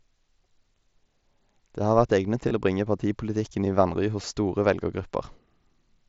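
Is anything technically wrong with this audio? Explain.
Yes. Concealed Bluetooth headset packet loss shows up twice in this speech. The first is from 2.49 to 2.51 s, about 22.5 ms of missing audio. The second is a brief one at 4.22 s, about 15 ms. Both gap lengths fit lost 7.5 ms headset frames. The receiver filled each gap by repeating the closest-matching recent stretch of waveform. Each patch is a short, buzzy hold with a faint warble as real speech resumes. The mSBC wideband link carries the audio.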